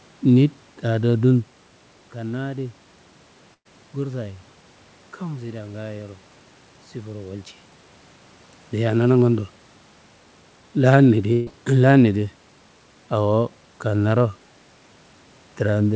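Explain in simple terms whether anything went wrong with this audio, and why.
Two short bursts of packet loss hit this speech, at 3.54 to 3.67 s and 11.33 to 11.53 s. Each time the call stretched the last sound and faded it out, went quiet briefly the first time, then jumped ahead, skipping roughly an eighth of a second.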